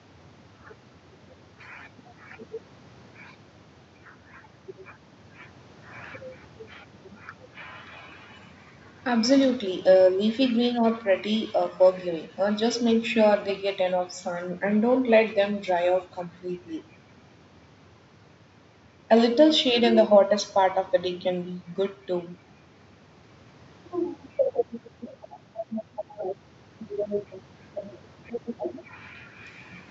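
No technical faults are audible.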